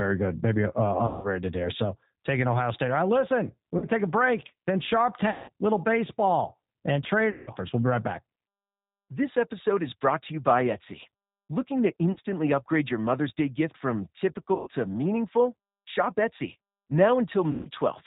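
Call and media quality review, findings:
G.729 codec, whole call: speech band stops at 4 kHz, slightly rough, synthetic edge throughout, which fits G.729A at 8 kbit/s. Damage is plainly audible: the vocal tract filter, pitch predictor and sparse pulses rebuild speech only approximately, so sibilants are dull.

VoIP packet loss concealed by the speech codec: seven dropouts at 1.07–1.28 s (160 ms lost), 3.78–3.86 s (40 ms), 5.30–5.49 s (180 ms), 7.31–7.50 s (160 ms), 12.12–12.18 s (40 ms), 14.55–14.69 s (120 ms) and 17.51–17.68 s (140 ms). Loss amounts fit 20 ms packets. Decoder extrapolates from the last pitch and filter with fading gain, and speech stays weak briefly after packets return. Check network path and jitter buffer.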